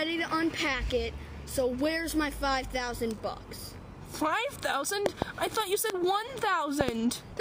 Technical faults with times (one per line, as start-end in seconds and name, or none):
5.06-5.24 loud pop
5.90-5.92 loud pop
6.81-6.91 loud pop